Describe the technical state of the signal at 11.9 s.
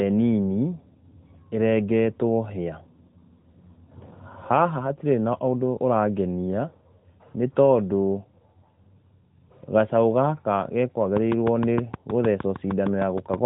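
At 11.9 s the speech sits inside a train of clicks running from 11.17 to 13.35 s: around fifteen sharp, similar pulses at a regular 6.45 per second, peaking roughly 10 dB above the signal, likely from interference or an unstable interface, heard as steady ticking over the narrowband AMR-coded speech.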